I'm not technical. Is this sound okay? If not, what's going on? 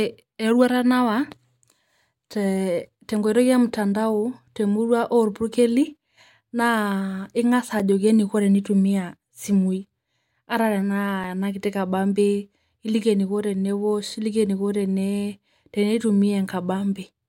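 No. There are two blocks of digital silence, at 7.79 seconds and 11.24 seconds. Each time, the speech drops to total silence for a few thousandths of a second and comes straight back with no fade. The hard cut is heard as a tick or a brief dip. The first comes just before "ajoki neikoo tenetumia". The second is about 3 milliseconds long, which fits one missing 128-sample block. This usually happens when the playback software doesn't deliver its next chunk of audio in time.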